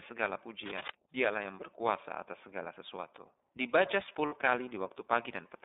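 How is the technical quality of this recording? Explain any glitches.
The quality is limited. The whole clip passes through a narrowband voice codec, and two short glitches interrupt the speech.

The iLBC codec runs throughout. The speech sits in a phone-like band of roughly 300 Hz to 3.7 kHz, with a rough, slightly synthetic texture that fits iLBC's 13.33 kbps mode with 30 ms frames. Each frame is coded independently of the one before.

Cable scratch noise appears from 0.63 to 0.94 s. It is a dense, uneven rustling burst, only somewhat quieter than the speech. The likely cause is a worn cable or connector being moved, which makes its contact resistance jump rapidly. Because it is irregular and scratchy rather than a single click or steady hiss, it sounds like contact trouble rather than a codec artefact.

Lost iLBC frames occur from 4.26 to 4.33 s, about 60 ms, which fits two lost 30 ms frames. 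The decoder filled the gap by repeating the last pitch cycle mixed with noise, so the sound briefly holds a buzzy, breathy vowel instead of going silent. Normal speech returns almost immediately afterwards.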